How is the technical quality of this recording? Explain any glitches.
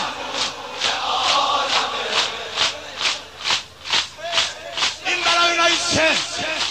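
No glitches or technical faults can be heard here.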